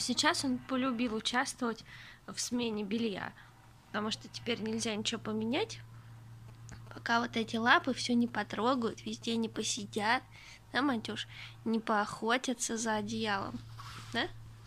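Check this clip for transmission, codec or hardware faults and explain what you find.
There's one fault here, and it's a classic: GSM signalling bursts between 6.48 and 9.80 s. A 2G handset close by was sending short clusters of radio bursts while signalling with the network, and something in the audio chain rectified that RF into the signal. You hear a galloping dit-dit-dit of brief buzzes at 217 Hz, sitting roughly 20 dB under the main sound.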